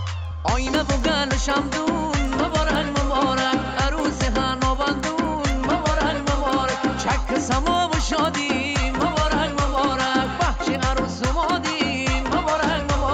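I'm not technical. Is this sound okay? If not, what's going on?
No. Throughout the clip there is a faint, steady ticking, four ticks a second, caused by a resampler restarted on every block: each quarter-second chunk was converted separately, leaving a small seam at each join. Random glitches would be irregular; these ticks keep perfect time and appear only while sound is playing.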